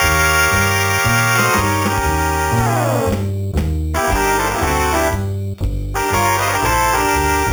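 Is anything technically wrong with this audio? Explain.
Yes. Throughout the clip there is imaging from sample-and-hold upsampling. The audio appears to have been raised from an 8 kHz rate to 48 kHz by repeating each sample with no smoothing. That leaves mirrored copies of the band, the first spanning 4 to 8 kHz at about 12 dB below the signal, heard as a bright metallic fizz. Unlike steady hiss, this fizz rises and falls with the sound, and its lowest copy moves opposite to the pitch.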